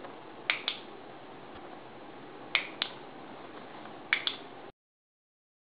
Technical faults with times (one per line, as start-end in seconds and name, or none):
1.54-1.58 damaged data in a compressed stream